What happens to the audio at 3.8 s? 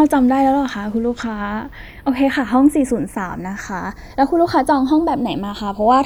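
At 3.8 s the speech is in the middle of channels drifting apart, a fault that runs through the whole clip. The two channels come from clocks that disagree by roughly 50 ppm, so the delay between them keeps growing, to around a third of a millisecond by the end. Summed to mono, this sounds like a slow flanging sweep. On a spectrogram, the comb notches show as dark bands gliding gradually.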